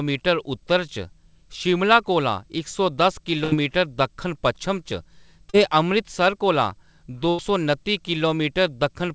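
At 3.44 to 3.54 s and again at 7.29 to 7.40 s, a burst of packet loss drops about 80 ms and then 100 ms. The receiver holds and fades the last sound before skipping ahead. At 5.50 s, a short concealed packet loss patches about 40 ms. It sounds like a brief smear blended back in.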